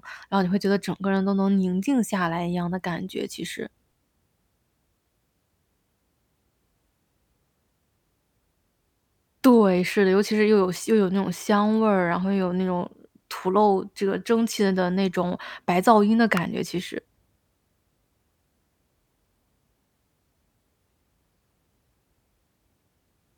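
At 16.37 s a single sharp snap cuts across the speech. It is an electrical switching spike, a brief arc riding on top of the audio rather than part of it. It lasts only a couple of milliseconds. Its peak is loud, around -10 dBFS. The likely cause is a nearby switch, motor or static discharge whose arc the audio line picked up. The result is one clean, tight click laid over the voice.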